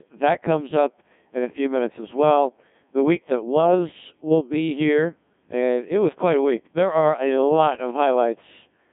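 Speech passed through a Codec 2 vocoder for its whole length, and the damage is heavy: the voice is rebuilt from sine waves driven by pitch, voicing and a spectral envelope, so it comes out buzzy and robotic, which points to a very low rate around 1.6 kbit/s. Plain telephone band-limiting would only muffle the sound within the same 150 Hz to 3.5 kHz band, with nothing above 3.8 kHz. Here, though, the original waveform itself is gone.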